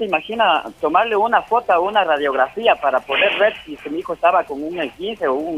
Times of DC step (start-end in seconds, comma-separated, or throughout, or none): none